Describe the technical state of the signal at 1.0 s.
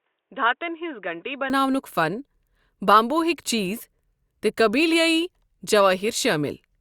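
At 1.0 s the audio is band-limited, with nothing above 3.8 kHz. It sounds dull and boxy from 0.0 to 1.5 s. It is about 5 dB quieter, with a faint new noise floor. The likely cause is an input switched to a poorer device.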